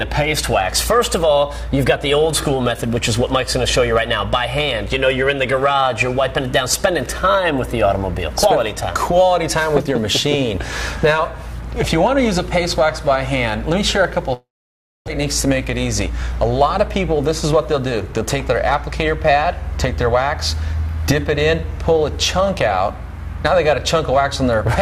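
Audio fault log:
14.33–15.10 s, long network dropout: the sound continues as a fading buzz, then goes silent for about 600 ms and resumes with that stretch missing, not delayed. This points to a likely network gap, with the receiver concealing briefly before giving up, shifting timing by roughly 150 ms.
16.81–18.94 s, jitter buffer speed-up: the audio plays about 4% fast at unchanged pitch. The receiver is trimming short pitch-period pieces repeatedly to drain excess buffered audio, removing roughly a tenth of a second in total.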